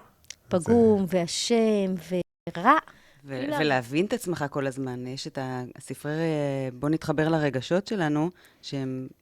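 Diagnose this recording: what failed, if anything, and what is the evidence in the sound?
A playback stall occurs from 2.22 s to 2.47 s: the speech cuts off mid-flow and the output goes completely silent for about 0.25 s before sound returns. The fault sits at the playback stage. The break is abrupt on both sides, with no fade or decay into the gap. This points to the output simply being starved rather than to anything in the recorded signal, most likely because the player's buffer ran dry or its audio thread was briefly blocked and could not deliver samples until it recovered.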